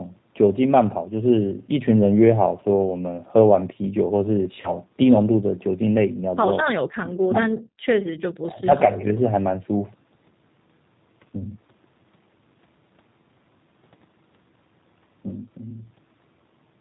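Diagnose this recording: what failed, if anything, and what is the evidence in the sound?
Across the whole recording the speech is narrowband, slightly rough and synthetic, with nothing above 4 kHz. That points to the codec stage: the G.729 codec (the G.729A variant, at a rate that fits 8 kbit/s). It rebuilds each 10 ms frame from a vocal-tract filter, a pitch predictor and a few sparse pulses, so fine detail is replaced by an approximation and the damage is plainly audible.

From 4.61 to 4.75 s the sound briefly smears into a stretched sound that fades, then takes a moment to recover. This is VoIP packet loss concealed by the speech codec, a network fault. About 30 ms of audio, consistent with a single lost packet, never arrived. The decoder repeated its last pitch and filter at falling gain, and because each frame predicts from the previous one, the voice stays weak past the gap.

Between 8.41 and 9.15 s the talker's level dips sharply, by roughly 25 dB at its deepest. 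The voice is held down for about 700 ms of that stretch. The likely cause is speech suppressed in double talk, in the call-processing stage. With both ends speaking at once, the echo canceller could not separate this talker from loudspeaker echo and attenuated the outgoing signal along with the echo.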